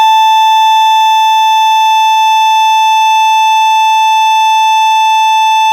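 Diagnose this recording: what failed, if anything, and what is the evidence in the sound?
A short stall from a late packet hits the music at 2.11 to 2.19 s: the network jitter buffer ran dry, the receiver stretched the last sound 50 ms, then resumed without loss.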